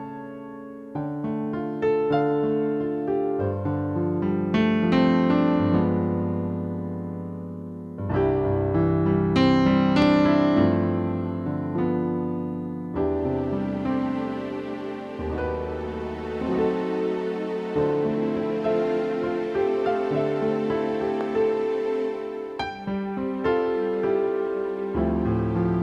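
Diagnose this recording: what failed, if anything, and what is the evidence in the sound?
Two loud pops occur, at 10.02 to 10.04 s and 21.21 to 21.23 s, peaking roughly 10 dB and 5 dB above the signal, with the audio continuing underneath. The likely cause is a voltage step in the analogue wiring, such as a connector, switch or static discharge.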